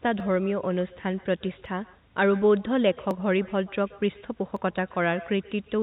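From the start and through the whole clip there is echo with no canceller: the far end's loudspeaker feeds its microphone and nothing removes it, so each phrase returns around 150 ms later as a thin copy about 22 dB below the speech.

Between 0.20 and 4.56 s, four regular clicks occur roughly every 1.46 s. These are likely clock drift buffer slips. Two clocks disagree by several hundred parts per million, and each time the buffer overflows or runs dry a few dozen samples are dropped or repeated.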